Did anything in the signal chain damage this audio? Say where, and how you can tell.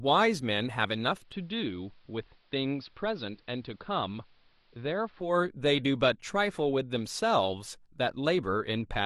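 Yes: digital radio blending to analogue at the receiver, 1.14 to 5.39 s. A 198 ms cross-fade to AM drops about 5 dB and adds faint hiss.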